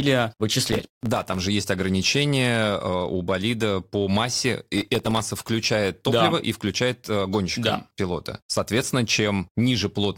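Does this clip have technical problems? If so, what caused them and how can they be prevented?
Yes. The speech has two bursts of processor overload crackle, from 0.67 to 1.38 s and again from 4.78 to 5.20 s. In both, the processor couldn't finish its tiny audio buffers in time, roughly 1.5 ms each, so dozens of them came out as silence. The first burst is the longer and denser one, the second much shorter. All those hard-edged dropouts in a row sound like gritty tearing over the sound. To prevent it, give the audio thread more headroom with a larger buffer or a lighter CPU load.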